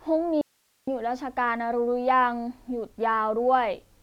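At 0.41 s the speech cuts out abruptly and stays gone until 0.87 s, an audio dropout to a faint residue lasting about 460 ms. Only hiss remains in the gap, somewhere around 45 dB below the speech, before the signal snaps back. The likely cause is a brief loss of the source while the downstream path stayed live. On a waveform the envelope collapses to a thin noise band; a spectrogram shows a sharp-edged block of faint, broadband hiss.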